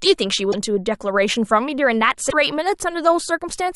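At 0.51 to 0.54 s and again at 2.29 to 2.35 s the speech stumbles with a brief glitch, roughly one and then two 26.1 ms frames' worth. That's likely a broken MP3 bit reservoir: frames went missing, so the frames right after each gap reached back for borrowed data and found the wrong bytes, which garbles them until decoding gets back on track.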